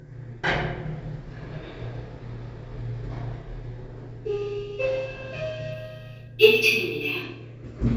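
From 5.73 to 7.23 s there is imaging from linear upsampling. A 16 kHz-to-48 kHz conversion by straight-line interpolation leaves spectral mirror images from 8 to 16 kHz, roughly 25 dB down. The result is a faint metallic shimmer over dulled highs.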